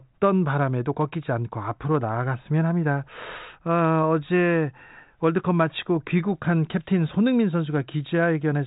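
No technical faults are audible.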